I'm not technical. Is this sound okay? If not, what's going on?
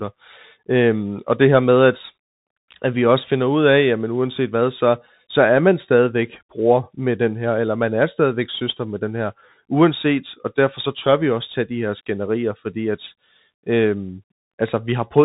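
No, it sounds like a Bluetooth CVSD headset codec throughout: nothing above about 3.8 kHz, so it's muffled and phone-like, with plainly audible grainy, scratchy damage.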